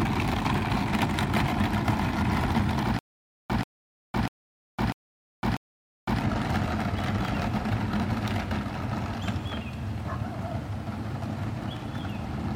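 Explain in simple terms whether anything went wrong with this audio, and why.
The playback most likely stalled between about 2.99 and 6.21 s. Each time it tried to recover, it replayed the last small piece of audio and then ran dry. The result is a stutter with silent gaps: the same 136 ms burst of sound comes back five times at a steady pace, once every 644 ms, with about half a second of dead silence after each one. Whatever should have played during that stretch is missing.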